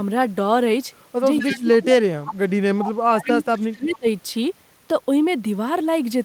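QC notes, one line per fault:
1.38–1.59 s and 3.25–3.32 s, echo leak: a fainter copy of the speech returns 247 ms late, roughly 10 then 15 dB down, likely uncancelled loudspeaker pickup; the spectrogram shows a delayed repeat of the harmonics.
1.42–4.06 s, speech suppressed in double talk: the speech dips and drops out in pieces, up to about 30 dB, for roughly 2 s in all, likely the echo canceller ducking both talkers; the waveform shows notched, gapped stretches.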